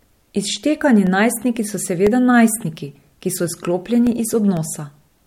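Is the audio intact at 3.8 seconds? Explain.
No. Periodic USB or driver dropouts run from 0.07 to 5.07 s, so 3.8 s falls inside them. Every 0.5 s a blocked bus or driver drops about a millisecond of speech and fills it with silence. The gaps sound as regular ticks while speech is present.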